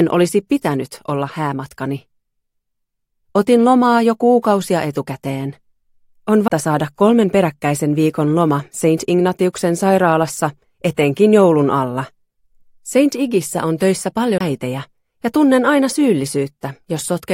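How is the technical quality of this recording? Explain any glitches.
A CD skip disrupts playback at 14.38 to 14.41 s. A jolt or disc flaw knocked the laser onto another turn of the spiral, so the player briefly muted for about 20 ms, producing a tick or short gap, then resumed from a different point, causing an abrupt discontinuity in the sound.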